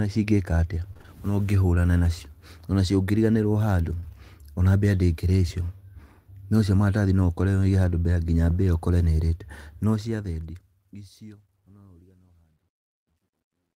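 Speech, marked by repeated packet loss between 0.93 and 1.10 s: four short gaps, the longest 29 ms, with about half that stretch patched, giving a choppy, robotic texture rather than one isolated dropout. A single short concealed packet loss at 4.00–4.04 s, just before "ona mbĩa ndĩngĩrĩa", is only a brief smear where roughly 24 ms was filled in, with no repeating pattern. The fade-out from 9.64 s to the end suffers truncation distortion at 11 bits, turning gritty, worst from 11.54 s. Unlike background hiss, this grit worsens as the level falls.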